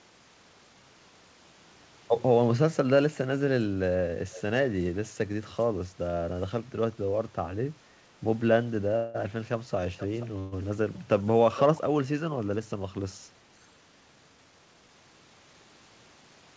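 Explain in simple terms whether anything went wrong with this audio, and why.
Echo leak: a quieter, delayed copy of the speech returns about half a second late, at 4.31–4.42, 9.97–10.26 and 11.57–11.78 s. Likely a loudspeaker echo the canceller missed.

Call audio freeze: at 8.96 s and 10.39 s the sound stalls into a fading buzz or hiss, for 0.18 s and 0.13 s. Likely late packets. Then it resumes with nothing lost.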